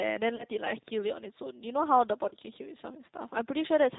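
G.729 codec damage runs through the whole clip: the speech is rebuilt from a vocal tract filter, pitch predictor and sparse pulses at what sounds like an 8 kbit/s rate, so nothing passes above 4 kHz and the voice is plainly rough, synthetic and band-limited.

VoIP packet loss concealed by the speech codec comes first at 0.36 to 0.45 s, which fits about 30 ms of lost frames, and again at 2.29 to 2.35 s, fitting about 20 ms. Each time the decoder extends its last pitch and filter at falling gain, giving a brief, fading smear that stays weak for a moment after the stream returns.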